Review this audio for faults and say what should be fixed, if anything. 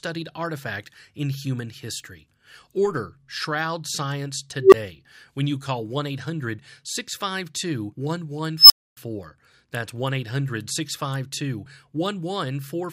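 An unstable filter blows up twice. At 4.60–4.74 s, just before "when you call", a tone around 400 Hz swells over 126 ms, clips, then drops out for 16 ms. At 8.58–8.97 s, a roughly 5 kHz squeal builds over 122 ms and then cuts out for 272 ms. In both cases the recursive filter's feedback runs away until the numbers overflow. To prevent it, check that the coefficients keep every pole inside the unit circle before loading them.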